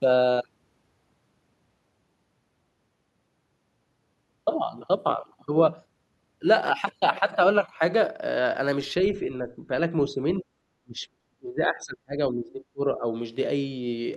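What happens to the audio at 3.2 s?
Nothing goes wrong at 3.2 s; the speech carries on intact through that moment.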